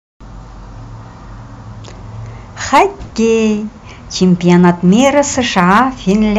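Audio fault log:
2.74–2.83 s, 4.22–5.20 s, 5.58–6.12 s: hard clipping. Harsh crackle on speech peaks, worst first; overdrive of about 9, 3 and 5 dB flattens peaks, adding high harmonics.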